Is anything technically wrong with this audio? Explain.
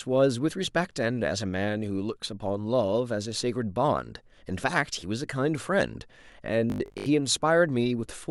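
Yes. Robotic sound from repeated short buffers appears from 6.7 to 7.1 s: the speech turns into a stiff, metallic buzz pitched at 50 Hz that only loosely tracks the talking. This is likely a playback path starved of fresh audio, which fills the gaps by replaying a 20 ms slice over and over while the real signal is skipped, so roughly seven parts in ten of what is heard there is repeated. That repetition period sets the fixed 50 Hz drone.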